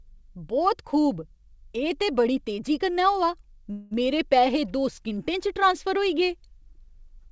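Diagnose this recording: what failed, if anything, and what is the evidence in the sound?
Packets were likely delayed in the network, emptying the jitter buffer and causing a call audio freeze from 3.72 to 3.93 s. The last sound is stretched into a fading fill for 191 ms. Nothing is lost, and the speech resumes 191 ms late, band-limited to 8 kHz by G.722.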